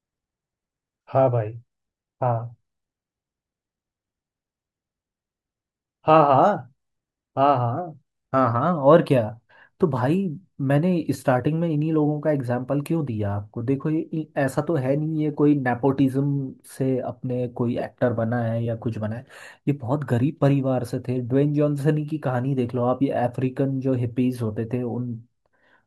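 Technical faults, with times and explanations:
16.44 to 17.55 s, channel delay (comb filtering): one channel lags by about a sample, so the mono sum cancels the top end near 20 kHz and sounds slightly dull.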